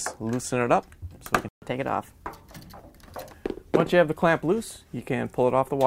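A playback stall at 1.48 s cuts the sound off in mid-flow, leaving about 135 ms of silence before it resumes at 1.62 s. The player likely ran out of buffered data, or its output thread was briefly blocked, so nothing reached the output until it recovered.

Catch-up at higher speed follows from 1.62 s to 2.97 s. To recover the lost time, the player resamples its backlog and plays it 1.1 times faster, which raises the pitch by roughly one and a half semitones. Speed and pitch both drop back to normal at 2.97 s.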